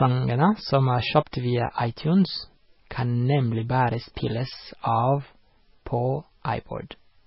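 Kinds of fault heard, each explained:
MP3 compression: The whole clip stops dead at about 5.5 kHz, so the speech loses its air and the s sounds come out dull and blunted. Around that, there's heavy watery, swirly smearing as weak frequency components flicker in and out from frame to frame. This is likely an MP3 encoder starved of bits, cutting the treble and dropping detail, which fits a very low bitrate somewhere under 20 kbps.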